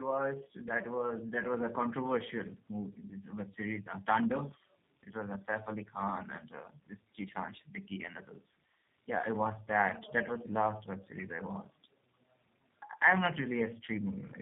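From start to finish the speech carries tandem speech coding, which sounds like two passes through a low-rate codec such as G.729A at 8 kbit/s, likely joined by a G.711 link. The second coder re-encodes the first one's artefacts, so the voice is rough, muffled and warbly. A spectrogram shows nothing above 3.8 kHz, with smeared, unstable formant bands. The waveform shows softened, slightly irregular voiced cycles.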